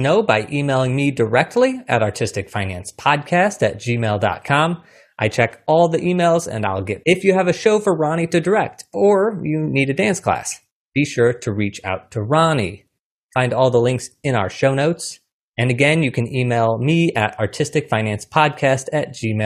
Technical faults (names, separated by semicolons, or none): stream segment skipped